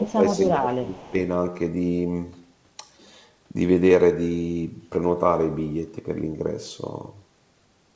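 Speech suppressed in double talk, from 0.0 to 1.14 s: the speech dips and breaks into fragments across roughly a second of that span, falling by about 20 dB at its deepest. The likely cause is an echo canceller that, with both sides talking at once, could not tell the local talker from the returning loudspeaker sound and pulled both down. The result is a speaker who seems to fade and drop out in pieces within the call's band-limited audio, which has nothing above 8 kHz.

Echo leak, at 0.4 to 0.48 s and again at 1.06 to 1.1 s: brief scraps of a delayed copy of the speech surface 257 ms behind the original. The first is faint, about 25 dB under the speech, and the second is barely audible, about 40 dB under. This is likely residual loudspeaker sound that the loudspeaker side's echo canceller failed to fully remove from its microphone signal and sent back down the line.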